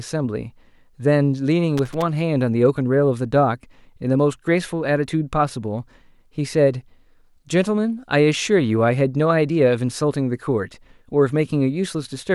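It's a speech clip with a short burst of loose connector crackle from about 1.77 to 2.02 s: an irregular scratchy rattle, the kind you get when a worn or dirty contact keeps making and breaking, chopping the signal and popping on any DC present.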